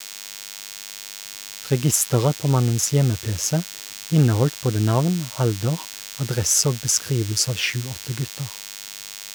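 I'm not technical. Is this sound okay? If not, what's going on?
No. A thin, steady buzz runs under the speech the whole way through. It's DECT cordless phone buzz: a nearby cordless phone pulses 100 times a second.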